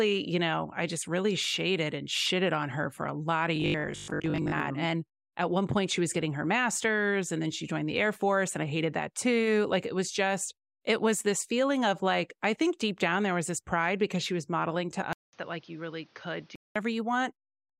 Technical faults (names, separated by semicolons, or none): robotic sound from repeated short buffers; input switched to a poorer device